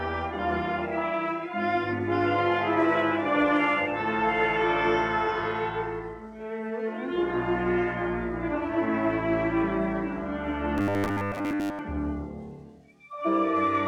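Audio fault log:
10.78–11.79 s, robotic sound from repeated short buffers: the sound goes into a rigid 100 Hz buzz, likely from a roughly 10 ms chunk replaying for most of that second.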